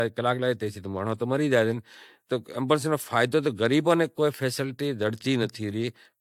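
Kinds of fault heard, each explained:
Generation loss: The speech has a swirly, smeared quality with a hollow, phasey edge that sounds worse than a single encode at this level would, and consonant attacks come across soft and blurred, with nothing above 19.3 kHz. The likely cause is repeated lossy encoding, around three passes through AAC-LC at a rate that points to 96 kbit/s, each pass quantising on a shifted frame grid so noise and spectral gaps pile up.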